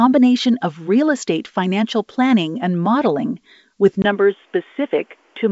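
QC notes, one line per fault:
4.02 s to end, input likely switched to a poorer device: after a 20 ms gap the band stops at 3.6 kHz and new background noise appears, unlike plain filtering.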